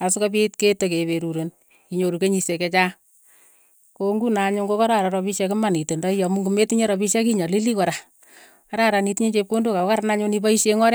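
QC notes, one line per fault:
Nothing to flag here; I didn't hear any technical problems anywhere in this speech clip.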